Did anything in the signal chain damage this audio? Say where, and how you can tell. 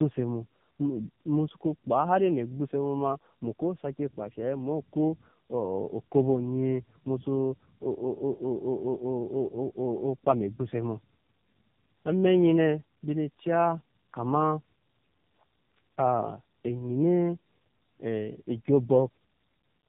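Yes, tandem speech coding at the codec stage, present throughout: the speech sounds rough, muffled and warbly with nothing above 3.8 kHz, as it was transcoded through two low-rate speech codecs.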